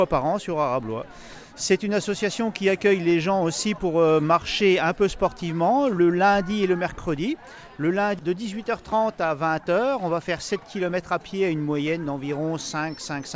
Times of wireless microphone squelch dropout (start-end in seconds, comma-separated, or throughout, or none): none